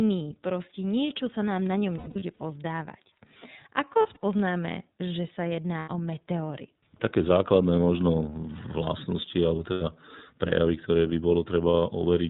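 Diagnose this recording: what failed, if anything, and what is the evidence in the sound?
iLBC codec coding runs through the whole recording, a fault at the codec stage. The speech is band-limited, with nothing above 4 kHz, and it has a plainly audible rough, slightly synthetic texture. iLBC models each frame's excitation independently at a low bitrate, which discards fine spectral and temporal detail. The sound fits iLBC's 13.33 kbps mode with 30 ms frames.

Lost iLBC frames at four points, a network-stage fault. The first is at 1.98 to 2.41 s, just after "sa nám na ňom". About 240 ms of dropouts are scattered across 420 ms, with the longest stretch near a tenth of a second. The others are at 3.92 to 4.23 s, at 5.78 to 5.88 s just after "že sa", and at 9.71 to 9.82 s. Each gap sounds like a held, buzzy vowel, because the decoder repeats the last pitch cycle mixed with noise. The voice comes back almost at once afterwards.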